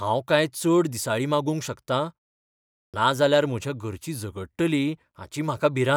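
After a pause of about 0.78 s, the output device has dropped into a low-power state and is still waking when the sound resumes, so the first 58 ms or so, from 2.88 to 2.94 s, never reaches the output. This clipped start after a pause makes the speech begin abruptly out of silence, its opening sound shaved off.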